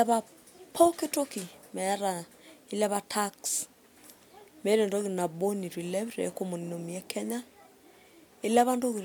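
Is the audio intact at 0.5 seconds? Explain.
Yes, the speech at 0.5 seconds is intact, with no audible fault at that moment.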